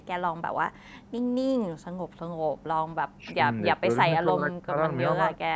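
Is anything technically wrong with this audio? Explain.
Yes. From 3.19 to 3.39 s the speech dips by about 10 dB, and from 4.16 to 4.77 s it drops by about 25 dB. This is likely speech suppressed in double talk: with both sides talking, the echo canceller turned down the near talker too. Between 3.26 and 3.31 s a faint repeat of the speech arrives 292 ms late, about 30 dB below it. That is likely an echo leak from a loudspeaker the canceller did not fully clean.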